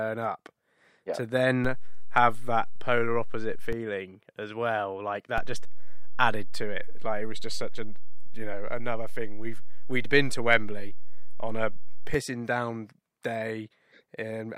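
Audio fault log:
1.65–3.73 s and 5.38–12.14 s, DC step: the waveform's zero line jumps to a fixed offset, about -23 dBFS in the first case and about -20 dBFS in the second, holds there, then snaps back. The first comes just after "up yeah to", the second after "as well like". Each sudden shift of the baseline, on and off, is heard as a low thump or click, while the speech riding on the shifted baseline carries on unchanged.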